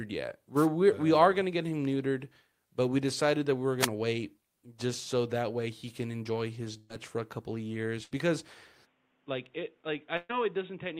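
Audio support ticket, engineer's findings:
Wireless microphone noise hit, 3.80 to 3.87 s, between "decided that we were" and "wait just so that". Brief swish of static over the speech from an analogue FM radio link fading as reflections cancel and receiver noise surges. Unlike packet loss, nothing is held or skipped.

Burst of packet loss at 6.77 to 6.92 s, after "way he can enjoy" (about 120 ms missing); 8.03 to 8.13 s, after "for a couple of" (80 ms); 10.17 to 10.31 s (120 ms, with a 10 ms dropout). Concealment holds and fades the last sound into buzz or hiss, then audio jumps ahead. No static.

Input switched to a poorer device, likely cause, from 8.85 s to end. Band cut off at 3.8 kHz, level down about 10 dB, new noise floor roughly 35 dB under the speech, no gap at the switch. Persistent change of tone, not a transient burst.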